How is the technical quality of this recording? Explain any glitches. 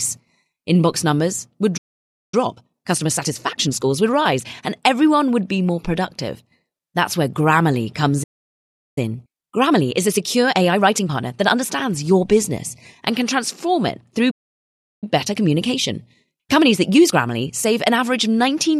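The speech in this recording is repeatedly interrupted by playback problems, and each interruption is followed by a hurried stretch.

Playback stall at 1.77–2.34 s, 8.23–8.98 s and 14.30–15.04 s: the player likely ran short of data or was blocked. The output drops to silence mid-flow for about 0.55 s, 0.73 s and 0.71 s respectively.

Time-compressed catch-up at 2.34–4.54 s, 8.98–11.90 s and 15.04–18.04 s: after each stall, the player trims its backlog by splicing out small pieces. The speech runs 1.25 times faster, then 1.15 times faster in the last stretch. The pitch stays normal.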